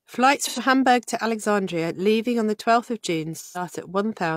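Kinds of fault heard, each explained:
AAC frame loss with concealment: Compressed frames went missing, and the decoder filled each gap from the last good spectrum. The speech turns briefly smeared and phasey from 0.46 to 0.59 s and from 3.40 to 3.61 s. These lengths fit two and three lost frames.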